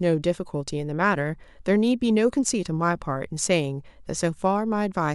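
Nothing stood out as a technical problem on listening to this speech recording.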